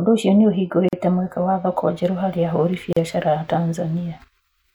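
It's a speech clip with two gaps at joins of encoded pieces, one at 0.89–0.93 s (about 43 ms) and one at 2.93–2.97 s (about 38 ms), about 2 s apart. That spacing suggests 2-second chunks encoded separately and butted together, with each chunk's leading encoder delay and trailing frame padding left untrimmed.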